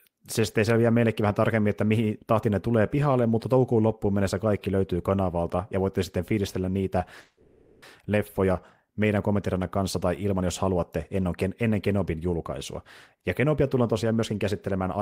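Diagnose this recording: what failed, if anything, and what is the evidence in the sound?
Call audio freeze, 7.20 to 7.83 s. The speech stops moving forward and the last sound is held as a fading buzz or hiss for about 0.62 s. The speech then resumes where it left off, with nothing apparently lost. The stage is the network feeding the receiver's jitter buffer. Packets were likely held up in transit, so the buffer ran dry and the receiver filled the gap. Everything after this point is delayed by 620 ms until the later speed-up.

Jitter buffer speed-up, 13.14 to 14.95 s. Over this stretch the speech runs about 8% fast at unchanged pitch and sounds hurried. The fault is in the receiver's jitter buffer, which was holding more audio than its target. To pull the delay back down, it cut short pieces of one or a few pitch periods again and again. In total it removed around 150 ms, which compresses the timing while leaving the pitch as it was.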